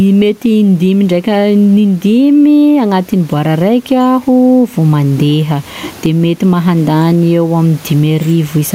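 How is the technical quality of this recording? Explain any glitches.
The recording has one clear fault. Gain pumping runs through the whole recording. The likely cause is input gain set far too high, with a fast limiter or compressor clamping the level whenever the speech gets loud. It swings the gain by roughly 15 dB, and the faint room noise sits about 38 dB below the speech. The result sounds squashed, with loud and soft passages close together.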